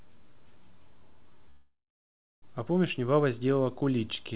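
At 1.50 s the speech halts and the last sound is stretched into a buzzing tail that fades, then gives way to silence for about 0.67 s, before speech resumes at 2.44 s. This call audio freeze, likely from packets held up in transit draining the jitter buffer, inserts a 0.92 s pause rather than losing anything. Unlike a dropout, the speech picks up exactly where it stopped, now later, still band-limited to 4 kHz by the call codec.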